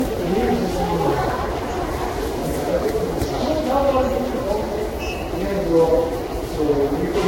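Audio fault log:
throughout generation loss: swirly, hollow smearing, blurred attacks, nothing above 16.6 kHz; worse than one pass near 60 kbit/s, likely about ten lossy re-encodes.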